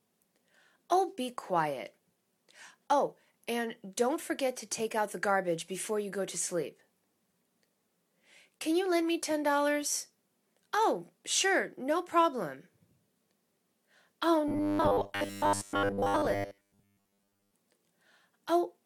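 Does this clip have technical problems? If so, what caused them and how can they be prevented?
Yes. From 14.48 to 17.54 s the sound turns into a stiff metallic buzz at 100 Hz, the robotic sound from repeated short buffers. New audio likely arrived too slowly, so playback looped 10 ms chunks in place of most of the real signal. A bigger jitter buffer or steadier delivery would prevent it.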